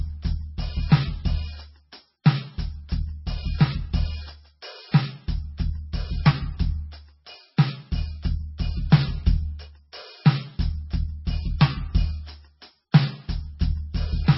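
MP3 compression damage runs through the whole music clip: nothing sounds above 5.6 kHz, the treble is gone, and heavy watery, swirling artefacts come from weak frequency lines switching on and off, which points to a likely very low bitrate of roughly 19 kbps.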